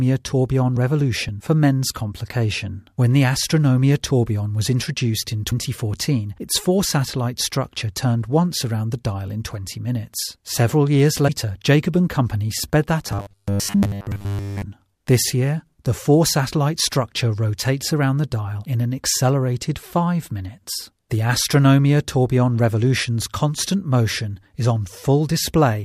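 At 5.50 to 5.53 s and again at 11.27 to 11.30 s, the audio jumps forward and the gap comes out as a brief chirp, noise burst or hole. These are likely a broken MP3 bit reservoir: frames went missing, so the next frame fetched its borrowed data from the wrong bytes. Each disturbance spans about one frame, which fits a 26 ms MP3 frame.

From 13.07 to 14.62 s the sound turns into a rigid, metallic buzz at 100 Hz that only loosely tracks the original. The likely cause is robotic sound from repeated short buffers: with new audio arriving too rarely, a 10 ms chunk was replayed over essentially the whole stretch.

Within that buzz, at 13.72 to 13.75 s, a third bit-reservoir break of the same kind and length adds another brief jump.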